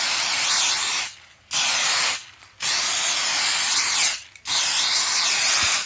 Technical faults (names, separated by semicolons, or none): none